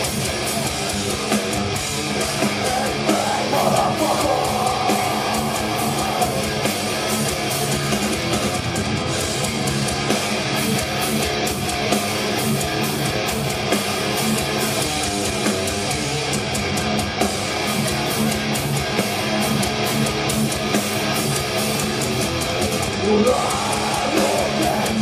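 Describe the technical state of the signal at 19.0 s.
At 18.98 s a run of compressed frames is skipped. The decoder never plays them, so about 20 ms of audio is lost and playback jumps forward.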